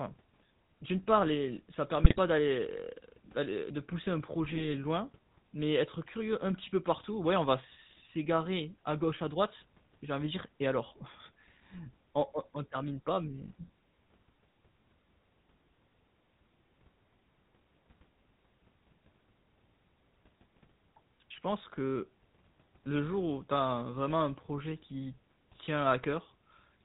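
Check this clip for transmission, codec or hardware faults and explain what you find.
Two faults are present: a codec coloration across the whole recording, and two short bursts of corrupted decoding.

GSM full-rate codec, throughout: the speech sounds plainly buzzy and gravelly and lacks anything above 4 kHz. That fits the 13 kbps GSM full-rate coder, which rebuilds speech from a coarse pulse-train excitation through a vocal-tract filter.

GSM bit errors, 2.04 to 2.19 s and 4.44 to 4.65 s: the speech breaks into squawks, pops and gargling. Flipped bits corrupted the decoder's filter, pitch or gain values, distorting the spectrum and level frame by frame.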